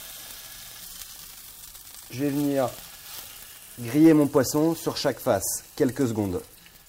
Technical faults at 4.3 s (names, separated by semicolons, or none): none